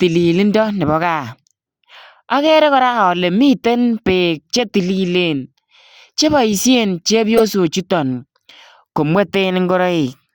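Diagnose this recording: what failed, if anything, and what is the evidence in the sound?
Codec stage: a corrupt frame decoded. After "che boisien", a brief glitch from 7.37 to 7.42 s. About one damaged frame, decoded with misread values.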